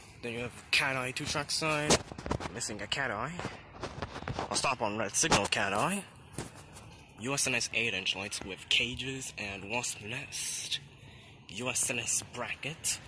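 No technical faults are audible.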